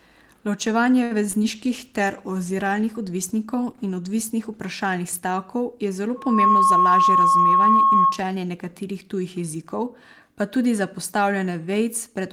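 At 1.03 to 1.27 s there is a short stall from a late packet. The jitter buffer ran dry and the last sound was held for about 72 ms, with nothing lost but a drawn-out sound with a slight buzz or dip. Two short concealed packet losses follow at 1.31 to 1.35 s and 1.39 to 1.43 s. Each dropped 20 ms of audio, which the receiver bridged by extending the preceding sound, leaving small smears. A call bitrate drop runs from 1.55 to 5.05 s, with the encoder falling from 32 to 18 kbps for about 2.7 s. The coarser coding makes the speech rougher and duller. A loudspeaker feedback squeal at 1.1 kHz rises over roughly 0.3 s from 6.16 s and sits about 10 dB above the speech until 8.22 s. Inside it, from 6.40 to 7.09 s, a jitter buffer speed-up trims roughly 70 ms of excess delay by cutting out pitch periods, so the speech runs at 111% speed with unchanged pitch.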